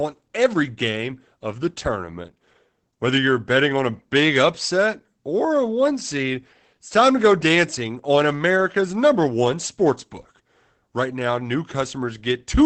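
Throughout the speech, Opus voice compression is plainly audible. The SILK coder, running in wideband, leaves the voice muffled, hoarse and slightly robotic, which fits a bitrate around 12 kbps. A spectrogram shows a hard ceiling, with nothing above 8.7 kHz.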